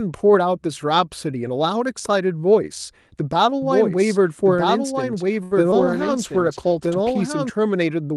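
From 3.62 s to 7.50 s, a doubled audio track is heard. A second full-band copy trails about one and a half seconds behind, roughly 5 dB quieter. It starts and stops abruptly, with no room colour. A slower capture path is the likely cause.

At 5.43 s comes a short stall from a late packet. The jitter buffer ran dry, so the last sound is held for 77 ms with a faint buzz. Then the audio resumes where it left off.

At 5.71 s there is a short concealed packet loss. About 40 ms never arrived in time. The receiver briefly continued the previous sound and then blended back, which gives a quick smear.

From 5.78 s to 7.29 s, a call bitrate drop makes the sound rough and muffled, with the high frequencies cut. This fits the encoder falling from around 40 kbps to 14 kbps and staying low for about 1.4 s.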